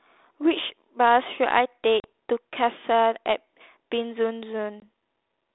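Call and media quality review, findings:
Packet loss on an ADPCM call, 2.0 to 2.05 s. Hard-edged gap of about 40 ms, roughly two packets' worth, filled with silence. After it, speech comes back with brief slight distortion. Cause: decoder predictor and step size out of step with sender.

Same fault at 4.8 to 4.83 s. Shorter gap, about 20 ms, roughly one packet. Same slight distortion on resumption, settling within tens of milliseconds. Line is G.726 at 32 kbit/s, band 250 Hz to 3.7 kHz, light codec grain.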